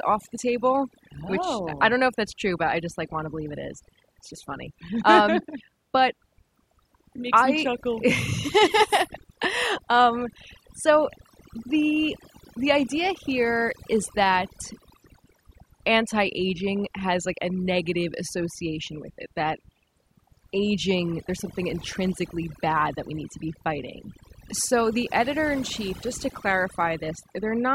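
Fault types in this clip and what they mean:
Overdone noise removal: a noise reduction process set too strong throughout the speech, pulling individual frequency bands far down or out whenever they sit near its noise estimate, so quiet parts of the speech are removed along with the noise. The background drops away and breaks into twinkling, warbling specks. Unlike a noise gate, which mutes everything at once between phrases, this works band by band, leaving scattered tonal fragments rather than clean silence.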